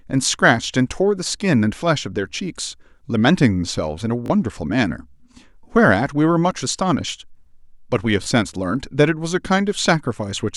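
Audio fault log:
4.26–4.30 s, Bluetooth stutter: the receiver ran short of data and replayed its last buffered slice, so a brief stretch repeats as a quick buzzing stutter. About 37 ms of sound is skipped, which fits two lost packets, and playback resumes further on.
8.24–8.26 s, Bluetooth stutter: a shorter repeat of one buffered slice as data arrived late, heard as a single stammer. About 19 ms is skipped, which fits one lost packet, before the sound picks up again.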